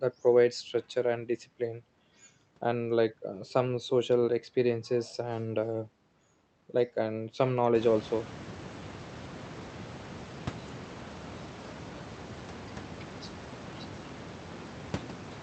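Nothing in this speech recording points to a technical fault. The room's background noise rises by about 24 dB at around 7.5 s but stays about 17 dB below the speech, and the call path's coding caps the high end at about 8 kHz, which fits Opus at around 32 kbps.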